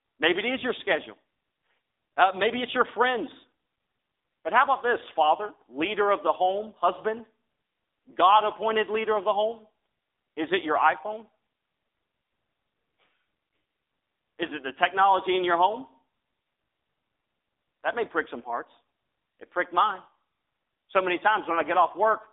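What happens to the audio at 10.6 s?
At 10.6 s you're hearing the AMR narrowband mobile codec, which runs through the whole clip. The voice is squeezed into a 300 Hz to 3.7 kHz phone band with nothing above 3.8 kHz, and the clearly buzzy, synthetic texture fits a low rate around 7.4 kbps.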